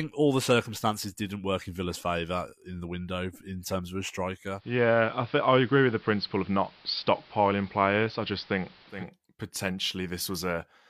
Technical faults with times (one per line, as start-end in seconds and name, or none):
4.53-9.10 digital radio blending to analogue